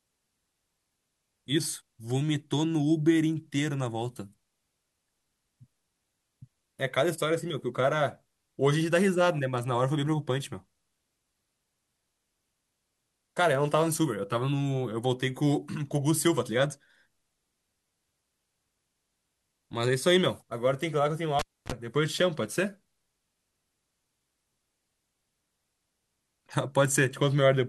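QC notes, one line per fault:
21.39–21.72 s, cable pulled and plugged in: a sharp pop cuts the speech to near silence for about 0.28 s. A short burst of 50 Hz mains buzz, roughly 37 ms long, follows, then a second pop as the signal comes back. A live lead was yanked out and pushed back in. The buzz is the moment only the plug tip touches and the shield is not yet grounded, so hum gets into the line before full contact returns.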